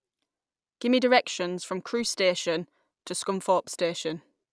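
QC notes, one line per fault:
No technical faults can be heard anywhere in the speech signal.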